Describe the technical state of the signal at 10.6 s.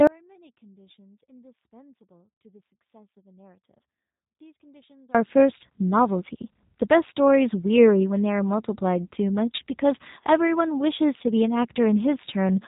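At 10.6 s you're hearing the G.729 codec damage that runs through the whole clip. The speech is rebuilt from a filter model, a pitch predictor and a few pulses, which fits an 8 kbit/s stream, so it sounds rough and synthetic, with nothing above 3.8 kHz.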